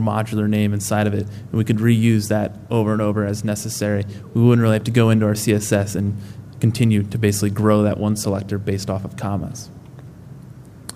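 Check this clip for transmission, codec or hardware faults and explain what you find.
Nothing in the clip points to a problem with how it was sent, encoded or captured. There are no events to report, so there are no times or values to give.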